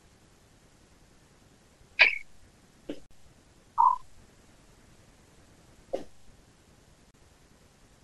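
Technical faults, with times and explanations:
3.06–3.11 s and 7.11–7.14 s, gap at a join of encoded pieces: the speech drops out for about 48 ms and then 32 ms before resuming exactly where it left off. The joins recur every 4 s, which fits separately encoded 4-second pieces joined without trimming the encoder's start-up delay and last-frame padding. The waveform goes flat between abrupt, slightly smeared edges, and the spectrogram shows a narrow blank vertical stripe across all frequencies.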